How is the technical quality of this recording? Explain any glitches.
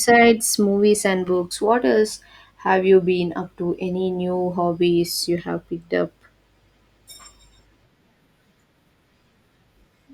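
The technical quality of this recording is good, with no glitches to explain.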